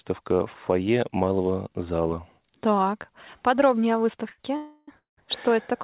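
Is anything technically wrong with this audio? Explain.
Yes, the speech is interrupted three times near its end, as it passes through a narrowband call path with nothing above 4 kHz, consistent with G.711 mu-law.

From 4.30 to 4.40 s the sound hangs for about 82 ms, the last fragment held with a faint buzz or dip before the speech resumes unchanged. This is a short stall from a late packet. The jitter buffer ran dry, and the receiver stretched what it had until the packet arrived.

From 4.56 to 4.89 s the sound freezes into a fading buzz or hiss for 313 ms. From 4.97 to 5.19 s it freezes again for 198 ms, decaying into roughly 140 ms of silence. Each time, speech resumes exactly where it stopped, with nothing lost. These are call audio freezes, likely caused by packets held up in transit emptying the jitter buffer, so the receiver padded each wait.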